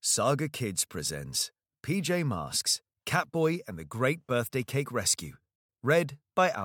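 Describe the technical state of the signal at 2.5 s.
At 2.5 s the signal is intact, with no dropout, distortion or other technical fault to be heard at that point.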